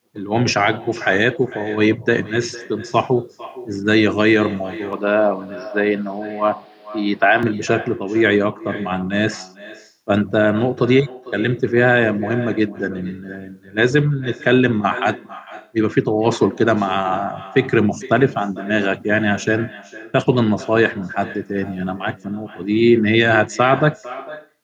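From the first second to the end, every phrase is trailed about half a second later by a fainter, thinner copy, sitting about 17 dB below the speech. This is echo with no canceller: the far end is playing the call through a loudspeaker, its microphone picks that sound up again, and nothing strips it out before it travels back across the network, so the talker's own speech returns after the full round trip.

Between 4.93 and 7.43 s the speech turns duller and boxy, then opens up again. There is no gap at either edge, the loudness stays about the same, and a faint new background noise appears, roughly 35 dB under the speech. The likely cause is the input switching to a poorer device, such as another microphone or a headset's call profile, whose narrower band and own noise briefly replace the original pickup.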